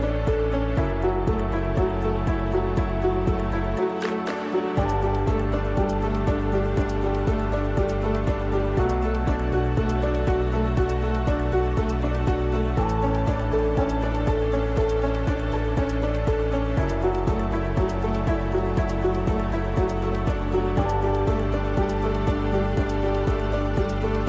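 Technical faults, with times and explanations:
No technical faults detected on listening; nothing to report.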